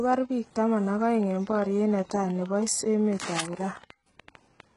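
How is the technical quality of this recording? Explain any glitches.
Technical quality is poor, with two faults. Heavy HE-AAC compression runs throughout: nothing above about 11.1 kHz, gritty, lispy treble, likely spectral band replication at a bitrate near 12 kbps. From 1.12 to 4.61 s, a train of clicks ticks at about six per second, unevenly spaced, around twenty pulses roughly as loud as the speech, which points to interference.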